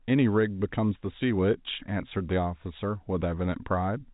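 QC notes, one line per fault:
No faults are heard in the speech. G.711 telephone coding is audible as a narrow band with nothing above 3.8 kHz, and any coding damage is faint at most.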